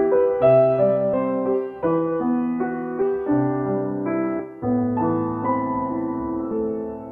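The audio has compressed frames skipped in four places: 1.13 s, 3.01 s, 4.39 s and 6.51 to 6.53 s. Each time the sound jumps forward, losing roughly 70 ms at the first, a tenth of a second at the second, closer to a fifth at 4.39 s and somewhere in between at the last. The jumps fit whole 20 ms frames going missing or being rejected by the decoder.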